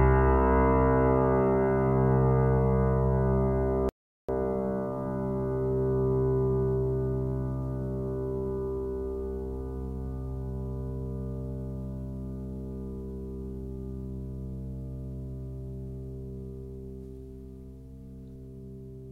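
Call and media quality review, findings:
Audio dropout to silence, 3.89 to 4.29 s: input likely lost briefly (link drop, device disconnect or mute) while the recorder kept writing silence. Music cuts out mid-flow for about 0.4 s, gap is dead silence with no room tone, content in that span lost.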